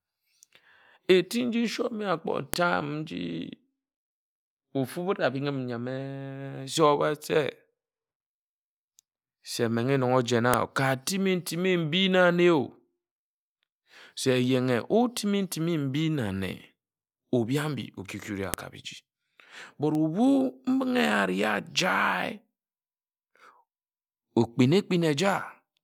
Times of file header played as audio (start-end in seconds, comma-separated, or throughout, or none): 2.54, 10.54, 18.54